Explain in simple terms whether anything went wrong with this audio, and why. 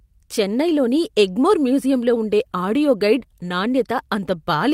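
Nothing went wrong with this speech recording, and no technical faults can be heard anywhere in it. Nothing in it points to a problem with how it was recorded, stored or played back.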